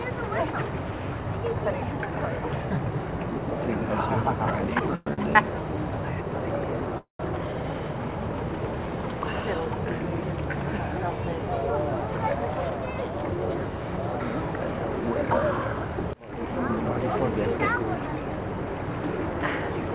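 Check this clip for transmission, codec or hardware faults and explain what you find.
Three kinds of transmission fault are audible, all from packet timing on the call link. The whole clip stops at 4 kHz, consistent with G.711 mu-law telephone coding.

Call audio freeze at 4.95–5.07 s and 6.98–7.20 s: the sound halts and a fading buzz fills 111 ms, then 217 ms. The second freeze ends in about 130 ms of silence. Both are likely caused by delayed packets draining the jitter buffer. Playback then resumes where it stopped, with nothing lost.

Short stall from a late packet at 5.13–5.19 s: one packet arrived late, so the receiver stretched the preceding sound for 42 ms. This produces a brief held tone with a slight buzz, and nothing is dropped.

Jitter buffer speed-up from 11.48 to 13.35 s: the receiver trimmed pitch-period slices to shed about a fifth of a second of excess delay. The audio runs at 110% speed at unchanged pitch and sounds hurried.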